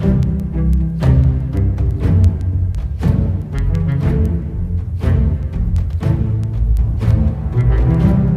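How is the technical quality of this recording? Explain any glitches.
The recording has a steady train of word clock ticks from 0.23 s to 8.28 s. Roughly every 0.15 s there is a sharp click of uneven strength, about fifty in all. The receiving device runs on its own clock, off by roughly 150 ppm, so each slip drops or repeats a single sample. A strictly regular rate sets it apart from random dust or dropout clicks.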